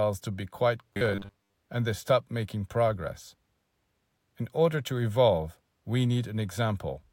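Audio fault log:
0.93 to 1.56 s, robotic sound from repeated short buffers: just after "to be quite", the speech collapses into a rigid, metallic buzz at a steady 100 Hz that only loosely tracks the words, clearing by "and they stop making". The likely cause is fresh audio arriving too late, so the playback loops its last fragment, about 10 ms judging by the 100 Hz pitch, to fill the gaps. Roughly half the sound is repeated material rather than real speech.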